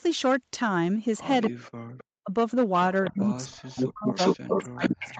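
Hard clipping runs through the whole speech clip: the signal is overdriven by about 6 dB, so a few percent of samples are cut flat. It sounds like crackly fuzz on loud syllables, shows as flat-topped waveform peaks, and puts harmonic smear up to the 8 kHz call bandwidth.

Echo leak appears as short delayed copies at 1.45, 1.98 and 3.04 s, 267 ms behind the original and about 15 to 25 dB down. From 3.77 s to the end comes a stronger copy, delayed 409 ms and only about 5 dB down. The likely cause is a far-end loudspeaker echo that the canceller failed to remove. On a spectrogram these show as duplicated harmonic patterns, shifted later in time.

Speech suppressed in double talk cuts the speech at 1.53–1.94 s, 2.23–2.31 s, 3.10–4.18 s, and from 4.47 s to the end, with drops of about 30 to 40 dB. It is likely the echo canceller ducking the near talker while both sides spoke. It is heard as gaps or a muffled voice and looks like sudden waveform collapses and blank spectrogram stretches.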